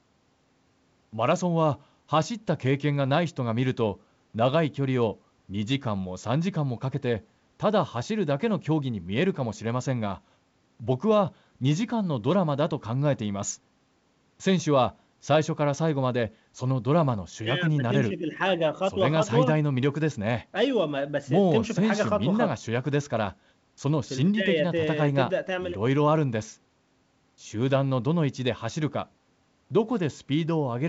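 No technical faults occur in this speech recording, which comes through G.722 wideband telephone coding at 64 kbit/s.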